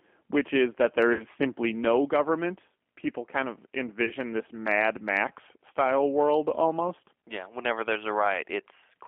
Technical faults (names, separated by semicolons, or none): G.729 codec; VoIP packet loss concealed by the speech codec